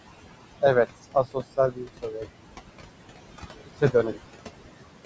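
Throughout the speech, noise suppressor artifacts are present: the steady room noise, sitting about 12 dB below the voice, is pulled down by about 20 dB in the gaps and returns beneath each phrase. A spectrogram shows the noise floor pumping frame by frame. Between 1.11 and 2.26 s, and again between 3.66 and 4.14 s, speech is cut by the noise suppressor. It treats quieter speech as noise and drops it by up to about 21 dB, for roughly half a second in the first span and a fifth of a second in the second, so soft sounds come out swallowed. On the waveform these appear as abrupt dips in the envelope, and the spectrogram shows the affected stretches thinning out, all within a band that ends at 8 kHz.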